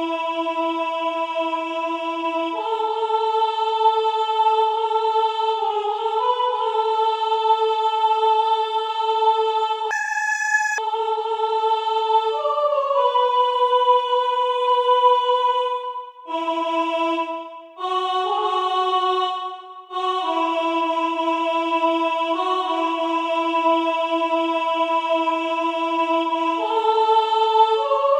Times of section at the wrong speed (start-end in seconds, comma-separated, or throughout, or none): 9.91-10.78